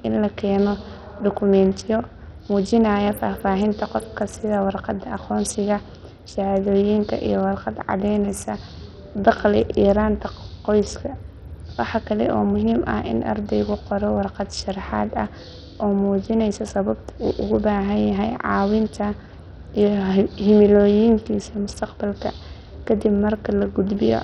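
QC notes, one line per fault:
Throughout: Bluetooth SBC compression. The speech has nothing above 16 kHz, upper treble flickers in and out, and a gritty, grainy noise with aliasing rides on the sound. The damage is heavy, which fits a low bitrate near 64 kbps. The likely cause is SBC's fixed, coarse sub-band coding, which works without a hearing model. That leaves steady grit rather than the swirly, watery artefacts and pre-echo of perceptual codecs.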